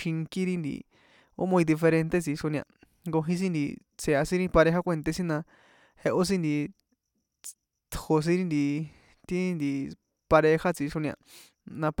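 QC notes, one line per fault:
No faults detected in this clip.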